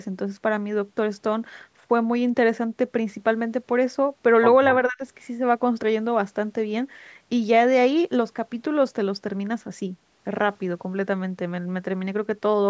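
Speech suppressed in double talk, from 4.88 to 5.01 s: the speech abruptly sinks by around 35 dB for a fraction of a second, then returns. The likely cause is an echo canceller on the call that faced both sides talking at once. It could not tell this talker's voice from the loudspeaker echo, so it turned everything down. The call's microphone processing leaves nothing above 8 kHz throughout.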